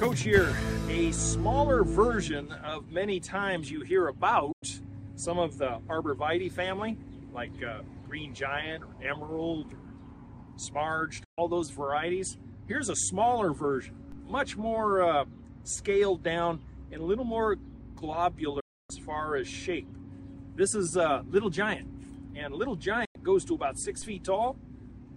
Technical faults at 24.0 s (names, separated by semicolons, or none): DC step